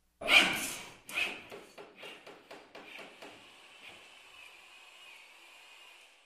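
No technical faults can be heard anywhere in the recording, and the signal holds together without any audible defect.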